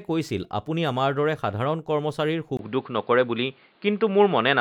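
At 2.57 s the speech drops out for a short 20 ms gap, then comes back duller and boxier through to the end, with nothing above 4.9 kHz. The level shifts by roughly 5 dB and a new noise floor appears well below it. That's the input switched to a poorer device, likely a different mic or a headset call profile.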